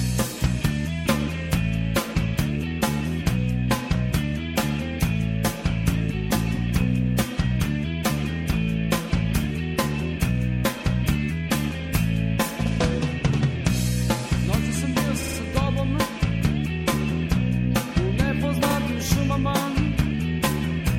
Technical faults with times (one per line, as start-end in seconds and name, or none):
0.00-20.98 MP3 compression
15.22-15.38 repeated frames
18.69-18.75 repeated frames